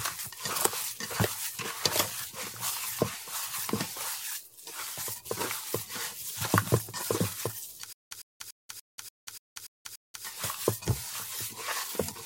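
From 7.93 to 10.25 s, a stutter with silent gaps: a 104 ms burst repeats eight times every 290 ms, with digital silence between, likely from a stalled stream.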